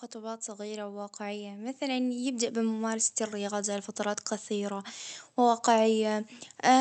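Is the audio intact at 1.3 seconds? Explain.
No. Automatic gain rising runs from 0.12 s to 6.80 s, so it covers 1.3 s. The gain control judged the input too quiet and kept raising its gain, so speech and background noise swell together, gradually growing louder throughout.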